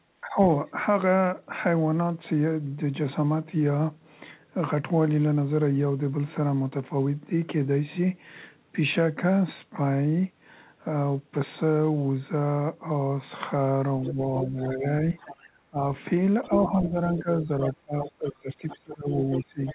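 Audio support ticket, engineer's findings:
Speech suppressed in double talk: talker dips at 0.21–0.75 s (about 15 dB), 14.09–14.86 s (about 10 dB), 15.39–15.84 s and 16.48 s to end (about 20 dB each). Likely the echo canceller can't tell near talker from loudspeaker echo and ducks both.

Other side's voice leaking through: far voice audible at 14.02–14.66 s (about 10 dB under the talker), 15.19–15.35 s (about 20 dB under), 16.44–16.63 s (about 5 dB under) and 17.18 s to end (about 15 dB under). Likely residual echo the canceller didn't fully remove. Everything is band-limited to 4 kHz, which fits G.711 mu-law at 64 kbps.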